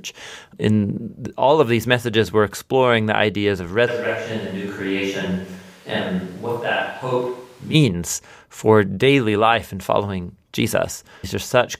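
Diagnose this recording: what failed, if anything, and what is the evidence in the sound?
At 3.89 s, after "exploring the ideas of", the speech suddenly turns roomy and hollow, about 5 dB quieter, with room noise about 25 dB down, until 7.73 s. This is a switch to a distant microphone, likely at capture. The reverberation rules out filtering or a gain drop.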